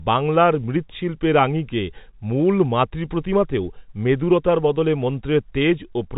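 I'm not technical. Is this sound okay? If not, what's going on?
Yes, nothing stood out as a problem when listening to this speech recording.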